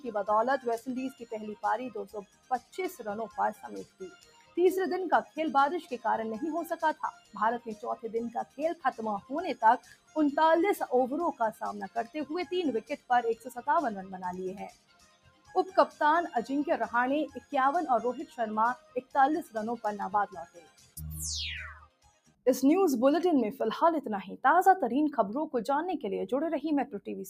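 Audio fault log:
Throughout: noise suppressor applied to music or sounds. The level keeps pumping and fluttering, swinging by roughly 15 dB, with held material and tails sinking while attacks get through. A speech-tuned suppressor was left on and treats steady tones and ambience as noise.
0.00 to 10.16 s, 11.52 to 16.01 s, 17.28 to 22.46 s: sound cut by the noise suppressor. Steady and decaying passages dip hard, deepest about 18, 19 and 20 dB, for around 4, 2 and 2 seconds in all, because the suppressor mistook them for noise.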